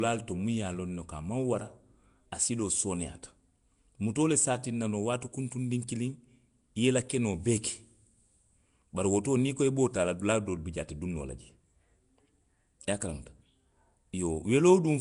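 A speech recording with a rough, hissy halo around it from start to finish, and a smeared, underwater feel to the whole thing. That texture is plainly audible and most likely Nellymoser compression, the old Flash microphone codec: it spends a fixed two bits a sample on short blocks, so quieter bands get no bits and are filled in with noise. Nothing comes through above about 10.6 kHz, which fits a rate of around 44 kbps.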